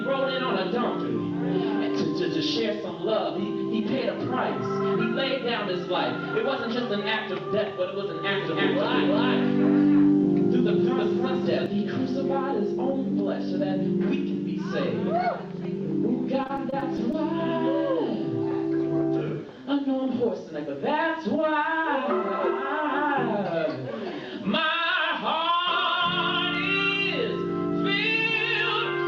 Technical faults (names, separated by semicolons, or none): doubled audio track; repeated packet loss (robotic sound)